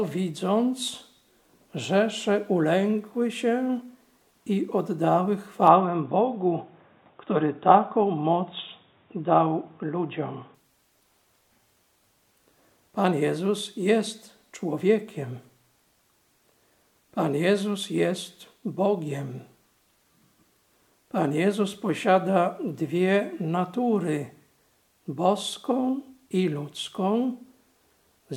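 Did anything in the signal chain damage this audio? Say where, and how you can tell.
Yes. From 5.67 s to 10.55 s the sound abruptly turns dull and boxy, with nothing above about 3.8 kHz, then clears again just as suddenly. There is no gap at either switch and the level holds roughly steady, but a faint new background noise appears well below the signal. This points to the driver or device stage: the input likely switched to a poorer device, a narrower-band microphone or headset profile, for those five seconds.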